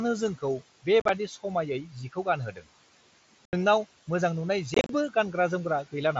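Throughout, a noise suppressor pulls the steady room noise down by about 17 dB frame by frame, so the residue sinks between phrases and swells under speech. At 1.0 to 1.09 s, unconcealed Bluetooth headset packet loss drops short chunks of the mSBC link with no concealment. About 52 ms goes missing across 90 ms, the longest gap 37.5 ms, leaving abrupt holes in the speech. At 2.52 to 2.62 s, the noise suppressor mistakes part of the speech for noise and turns it down by up to about 12 dB for roughly a tenth of a second, so the sound there seems swallowed and faint. At 3.45 to 3.53 s, more unconcealed packet loss cuts a solid 75 ms hole with hard edges. At 4.74 to 4.90 s, losses totalling 97.5 ms scatter over 150 ms, the longest run 30 ms, and the speech sounds chopped and crackly.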